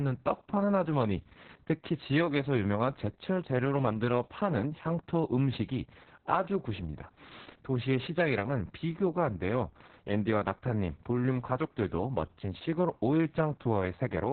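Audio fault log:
Throughout, Opus voice compression: the speech sounds muffled, hoarse and faintly robotic, with nothing above 4.5 kHz, so sibilants and consonant edges are dull and the voice sits in a telephone-like band. This points to Opus running its SILK linear-prediction coder in narrowband mode at a very low rate, which fits about 6 kbps. At that rate it keeps only the lower band and codes the excitation coarsely, so the buzzy roughness is heavy.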